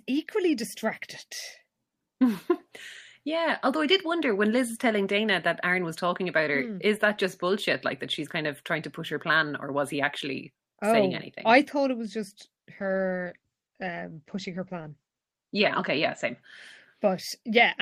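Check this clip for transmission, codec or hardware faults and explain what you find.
There is one fault, a call bitrate drop. From 12.8 to 16.47 s the speech turns muffled and rough, with the top end cut from 20 kHz to 8 kHz for nearly 3 s. The coarser encoding after the bandwidth estimate fell fits a drop from 32 to 12 kbps.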